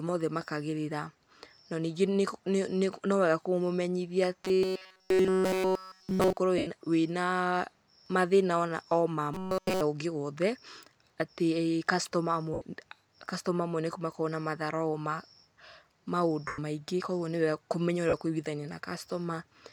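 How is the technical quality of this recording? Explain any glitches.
Two kinds of glitch affect this speech recording: two stretches of robotic buzz and four brief dropouts where the sound turns to noise.

From 4.45 to 6.37 s and again from 9.34 to 9.81 s, the voice becomes a rigid, metallic drone pitched at 188 Hz, still loosely tracking the words. This is likely robotic sound from repeated short buffers: audio arrived too late, so a segment of roughly 5.3 ms was looped almost continuously, stamping its repetition rate onto the sound.

At 6.58 s (82.5 ms), 12.54 s (75 ms), 16.47 s (105 ms) and 18.09 s (37.5 ms), the voice briefly smears into hiss and fades. These are lost LE Audio frames. The LC3 decoder concealed them by reusing the last spectrum with scrambled signs, and the longer gaps fit runs of 7.5 ms frames.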